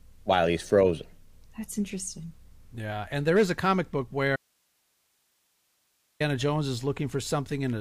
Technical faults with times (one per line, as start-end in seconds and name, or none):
4.36-6.20 audio dropout to a faint residue